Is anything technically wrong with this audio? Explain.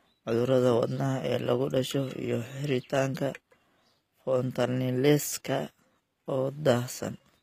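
Yes. Throughout the speech the high end has the gritty, metallic sheen of HE-AAC compression, plainly audible and likely from a low-bitrate encode around 24 kbps. Only the lower spectrum is truly coded; the treble is rebuilt by copying lower bands upward under a coarse envelope, so harmonics fail to align above the crossover and s sounds turn lispy and brittle. A spectrogram shows smeared, repeated-looking upper bands and a hard ceiling near 15.5 kHz.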